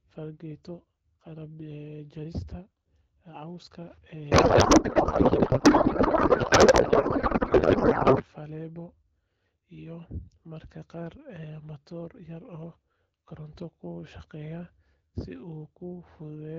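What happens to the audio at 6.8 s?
At 6.8 s the speech is lost inside a codec payload misread that runs from 4.31 to 8.26 s. The garbled, warbling noise barely tracks the speech, which points to octet-aligned AMR frames being unpacked as bandwidth-efficient, so every field lands in the wrong place. On a spectrogram the harmonic striations vanish into smeared, noisy energy with hard edges at both boundaries, unlike the clean AMR-WB audio on either side.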